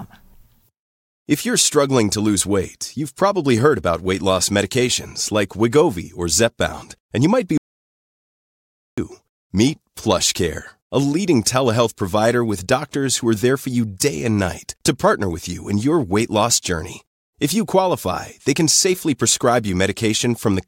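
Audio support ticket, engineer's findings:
Speech cuts out mid-phrase after "and you might be" at 7.58 s; dead silence, no room tone, until 8.98 s, about 1.4 s lost. Audio dropout to silence: input likely lost upstream (device disconnect, link failure or mute) while the recorder kept writing silence.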